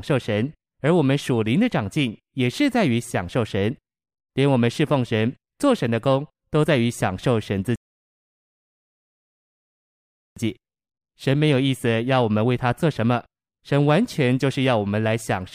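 At 7.76 s a rebuffering stall cuts the speech to silence for 2.61 s. Playback then resumes exactly where it stopped, so nothing is lost, unlike a dropout.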